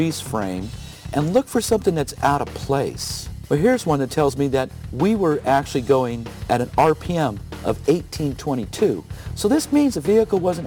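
From start to finish the audio carries crude rate conversion, consistent with a 44.1 kHz to 48 kHz change made by repeating nearest samples without filtering. The resulting error, roughly 30 dB below the signal, appears as a gritty, inharmonic fizz that tracks loud and high-frequency material.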